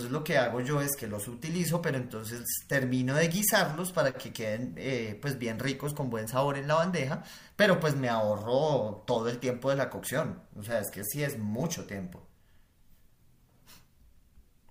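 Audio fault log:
No faults heard.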